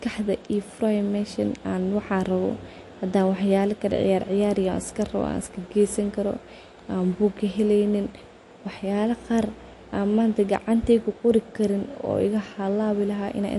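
Speech runs throughout with plainly audible MP3 compression damage, likely from a low-bitrate encode (around 48 kbps). Nothing survives above 11.3 kHz, and unlike a simple low-pass filter, the remaining band sounds watery and swirly, with chirpy sibilants and smeared onsets.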